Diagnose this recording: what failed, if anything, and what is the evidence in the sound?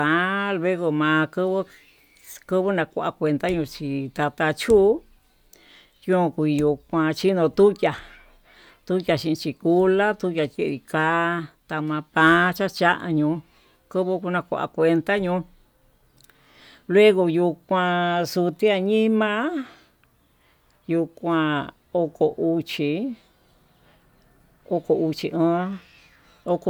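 Nothing in this speech recording points to a failure anywhere along the chain, so there's really nothing here to diagnose.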